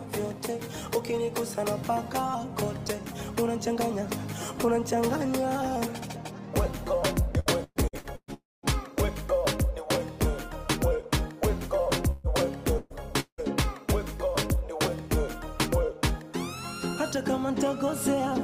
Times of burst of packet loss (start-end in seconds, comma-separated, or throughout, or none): 12.11-12.27, 12.78-12.93